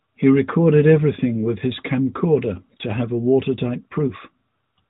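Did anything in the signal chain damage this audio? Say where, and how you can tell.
No, nothing in the chain damaged this speech. It has the narrowband sound of the AMR narrowband mobile codec, with nothing above 4 kHz and only light coding colour, which fits AMR-NB's 12.2 kbps mode working as designed.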